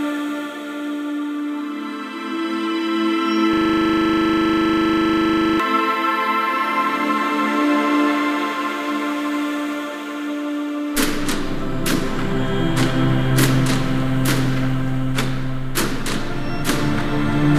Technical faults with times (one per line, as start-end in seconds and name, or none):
3.53-5.60 system hang loop